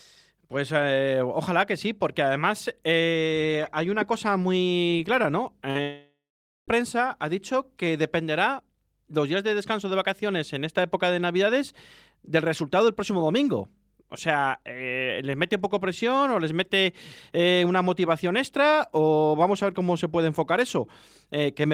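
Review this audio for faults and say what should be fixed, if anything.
Short concealed packet loss at 5.70 to 5.76 s: about 50 ms of the call reached the decoder too late, and the receiver patched 44 ms of it by extending the preceding speech before blending back, which leaves a brief smear in the voice.

Long network dropout from 5.82 to 6.69 s: the stream likely stalled for about 860 ms, so the receiver stretched the last sound into a fading buzz or hiss, then about half a second of silence follows before speech resumes at "ha dicho que dependerá", the lost stretch gone.

Both come from the network path, so stabilising the connection and adding forward error correction with an adaptive jitter buffer would prevent them.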